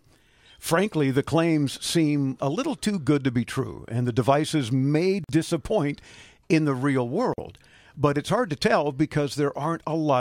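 At 5.24 s and again at 7.34 s the speech drops out briefly, about 49 ms and 44 ms, then picks up right where it left off. That's a gap at a join of encoded pieces: separately encoded chunks spliced with their start delay and end padding still in.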